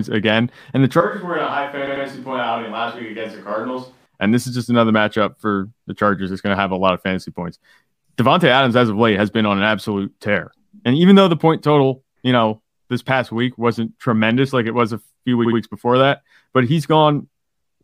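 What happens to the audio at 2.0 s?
At 2.0 s the speech is affected by two overlapping faults.

From 1.01 s to 4.06 s the sound has the character of a switch to a distant microphone. The close pickup is likely missing, and a microphone further from the talker is carrying the signal. The change is abrupt at both ends. The voice turns roomy and hollow with thinner bass, drops about 10 dB in level, and sits over room noise only about 35 dB below the speech.

Inside that span, from 1.86 s to 2.05 s, there are repeated frames. A compressed block about 93 ms long is played twice more than it should be. That duplication, consistent with a short run of codec frames being written or sent again, makes the decoder output the same fragment in succession. It is heard as a brief stutter, and the clip runs 185.8 ms longer than the original event.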